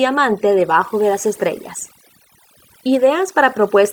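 From start to finish, overdone noise removal strips bands near the noise estimate along with quiet parts of the speech, leaving near silence flecked with twinkling specks. A spectrogram shows scattered isolated dots between words and ragged, hollowed-out speech harmonics.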